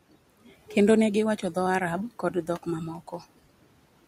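From 2.15 to 2.67 s, speech is cut by the noise suppressor. It mistakes quiet parts of the speech for background noise and pulls them down, by about 18 dB at the deepest. Roughly a tenth of a second is affected in all. Those sounds come out swallowed and faint, sinking toward the room noise that sits about 21 dB below the speech.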